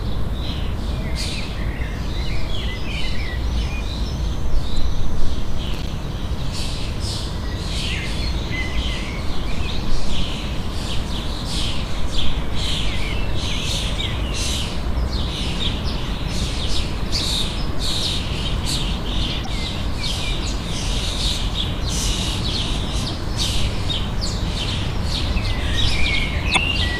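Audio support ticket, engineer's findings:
Damaged data in compressed stream: short glitch blips at 4.74–4.78, 8.20–8.23, 11.41, 19.43–19.47, 26.53–26.58 s. Decoder misreads corrupt frames, loses sync, jumps to next header. Spectrogram: brief broadband smear; waveform: small discontinuity.

Processor overload crackle: gritty tearing burst 5.67–5.88 s. CPU missing buffer deadlines, with a handful of dropped buffers around 10 ms each output as silence. Waveform: several hard-edged dropouts in close succession; spectrogram: vertical broadband click lines clustered across that span.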